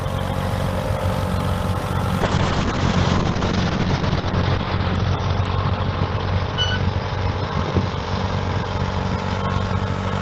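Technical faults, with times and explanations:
2.23 s to the end, call bitrate drop: the call's bandwidth estimate fell and the encoder was starved of bits, which fits a cut from 32 to 7 kbps. Coarser coding makes the sound rough and watery, and the top end falls from 20 kHz to 6 kHz, so it sounds muffled.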